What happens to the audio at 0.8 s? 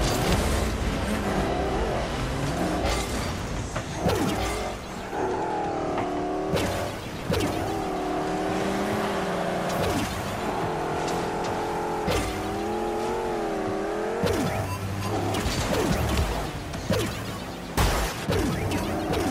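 Nothing goes wrong at 0.8 s; the audio there plays through intact, with no dropout, click or distortion.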